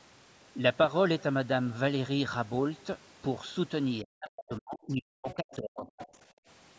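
Speech suppressed in double talk runs from 4.02 to 6.01 s. The talker's voice dips and breaks into pieces, sinking by about 40 dB at its deepest, for roughly a second and a half in total. This is likely an echo canceller that could not separate the talker from the loudspeaker echo while both sides spoke, and so turned everything down.

The other side's voice leaking through appears at 5.29 to 5.35 s, 5.51 to 5.56 s and 5.85 to 6.06 s as brief scraps of a second voice, about 15 to 25 dB below the talker. The likely cause is loudspeaker playback that the canceller failed to remove fully from the microphone.

Background gated by the echo canceller follows at 6.32 to 6.47 s. The room sound drops away for about 150 ms, by about 25 dB at its deepest, then returns. The canceller clamped the microphone hard while the loudspeaker played and released it afterwards. The band stops at 8 kHz, which is normal for call microphone processing.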